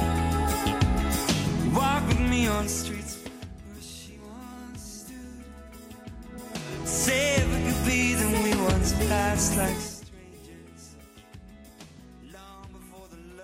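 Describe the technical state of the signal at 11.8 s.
At 11.8 s the audio is intact, with no fault present at that moment.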